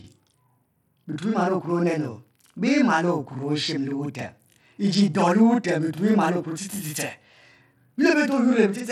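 From start to finish, every syllable arrives twice: a second, equally loud copy trails the first by 40 ms, so the speech sounds doubled, like a tight slap bouncing off a nearby wall. This is channel delay (doubling). One channel of the recording runs late by a long buffer, and when both channels are folded down to mono the late copy no longer blends with the first. It sits 40 ms behind as a distinct repeat.

Throughout the clip there is also a gritty, granular roughness on the speech. The treble is thin and unsteady, and the sibilants shimmer rather than hiss cleanly. Nothing is heard above 16.7 kHz. The likely cause is Bluetooth SBC compression at a modest bit pool, which fits a rate around 96 kbps. The encoder splits the signal into a few wide bands without a real hearing model. The weak upper bands are starved of bits and the rest are coarsely quantised, which leaves the treble flickering and audible noise and aliasing riding on top.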